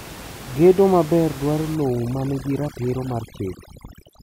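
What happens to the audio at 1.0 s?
Nothing goes wrong at 1.0 s: the speech continues intact, with only the room noise from the recording space sitting about 16 dB beneath it.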